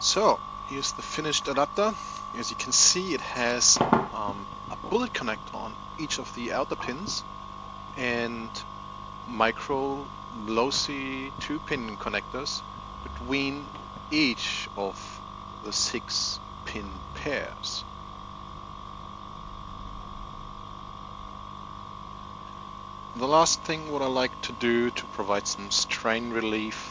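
No technical faults are audible anywhere in the recording.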